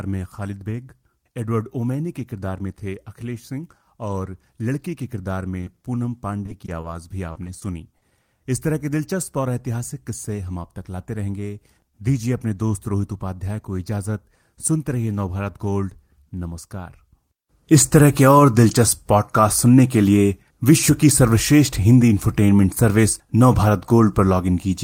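Packets went missing repeatedly from 5.61 to 5.83 s, and the receiver patched each hole of up to 20 ms by extending the preceding sound, about 60 ms of fill in all. This is repeated packet loss (robotic sound), giving the speech a brief choppy texture.

Short concealed packet loss follows at 6.46–6.50, 6.66–6.70 and 6.82–6.86 s. Each time about 20 ms of audio arrived too late and was replaced by continuing the last sound, so each spot is a small smear or wobble.

From 7.32 to 8.13 s the repeated packet loss (robotic sound) returns with longer holes of up to 40 ms. About 130 ms of patched audio, roughly a sixth of that span, makes the speech there sound choppy, with fragments missing.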